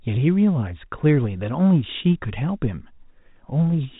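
Nothing goes wrong anywhere in the speech here, just the usual narrow telephone sound of G.711 coding with nothing above about 3.8 kHz, and no faults to point out.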